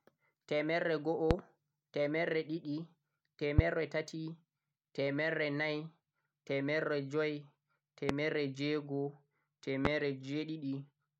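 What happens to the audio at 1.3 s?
A loud pop hits at 1.31 to 1.34 s, a single sharp burst lasting about 30 ms that peaks around 25 dB above the surrounding speech. It was likely caused by a sudden voltage step or pulse, such as a connector being disturbed, a switch, a static discharge or a driver glitch, entering the signal path. The following circuitry shapes that spike into a brief thump, and the speech continues unbroken beneath it.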